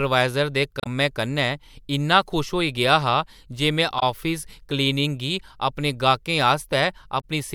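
Speech with damaged data in a compressed stream at 0.80–0.87 s (before "कन्नै इन्ना"), 3.99–4.03 s (after "गेआ हा जे में") and 7.20–7.24 s. The decoder misreads corrupt frames and resyncs, so each fault is a brief glitch in the audio.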